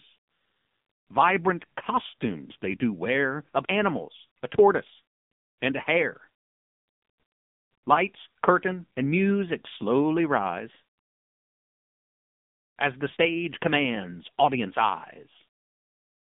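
Throughout, AMR narrowband mobile codec damage: sound is confined to roughly 150 Hz–3.6 kHz, and the heavy buzzy, synthetic quality, fitting about 6.7 kbps, distinguishes it from simple telephone band-limiting.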